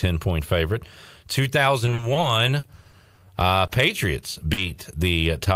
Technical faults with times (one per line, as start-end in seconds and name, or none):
1.85-3.26 repeated packet loss (robotic sound)
3.67-3.71 short concealed packet loss
4.53-4.59 short concealed packet loss